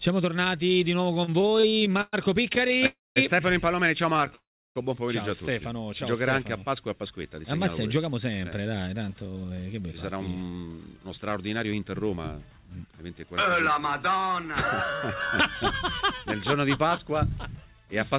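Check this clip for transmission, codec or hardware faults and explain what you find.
There are three kinds of network fault here, all coming from late packet delivery and the jitter buffer that smooths it out. The audio passes through a narrowband call path with nothing above 4 kHz, which fits G.711 mu-law at 64 kbps.

Repeated stalls (stutter) appear three times: 1.14 to 2.15 s, 2.53 to 2.84 s, and 4.15 to 4.30 s. The sound catches and drags in quick little hitches, as if it keeps tripping. In the first stretch there are 14 brief holds, the longest 117 ms, and together they take up about a third of that span. The second has 7 holds of 20 ms or less, and the third has 4 of 13 ms or less. Packets arrived late again and again, so the buffer ran dry and the receiver stretched the last sound each time. Nothing is lost, only delayed.

Call audio freeze occurs at 2.86 to 3.18 s and at 4.35 to 4.78 s. 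The sound stops dead, holds briefly as a fading buzz or hiss, then goes quiet before resuming exactly where it left off. The first pause adds 296 ms, about 200 ms of it silent. The second adds 402 ms, about 340 ms of it silent. The likely cause is packets held up in transit, which emptied the buffer until they arrived, so a gap was inserted and nothing was dropped.

Jitter buffer speed-up runs from 6.95 to 12.78 s. The audio plays at 110% speed with unchanged pitch and sounds noticeably hurried. After the earlier delays, the packets that had built up left the buffer holding too much. The receiver trimmed many short pitch-period slices to catch up, cutting roughly half a second in total.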